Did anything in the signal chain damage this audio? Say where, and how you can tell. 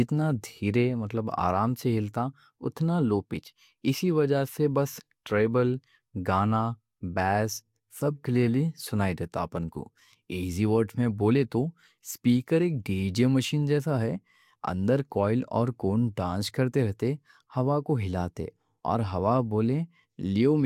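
No, nothing in the signal chain damaged this audio.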